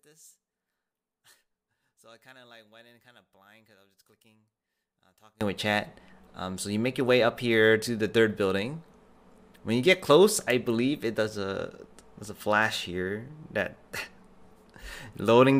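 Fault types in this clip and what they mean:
One channel inverted: one stereo channel was likely flipped in polarity, so what both channels share cancels in a mono sum. From the start to 5.41 s the sound falls by about 32 dB, leaving only a faint remnant of the inter-channel difference.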